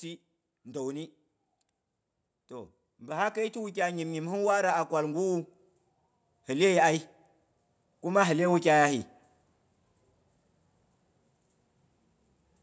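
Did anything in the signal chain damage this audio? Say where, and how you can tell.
Yes, automatic gain rising in the call processing stage, from 2.48 to 5.46 s. The speech and room noise swell together by about 7 dB over those three seconds, so the AGC judged the input too quiet and crept its gain up. The band stops near 8 kHz, as expected for a call microphone path.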